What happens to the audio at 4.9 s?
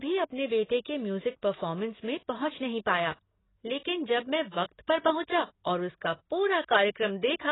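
At 4.9 s the speech carries the same damage it has from start to finish, most likely AAC compression. Nothing is left above 3.9 kHz, and the heavy smearing points to AAC-LC at a very low bitrate, around 16 kbps. The encoder quantises each frame's frequency lines coarsely and discards the top band. A plain low-pass filter would only dull the sound. This has the codec's warbling, fizzy texture on sibilants and sustained sounds.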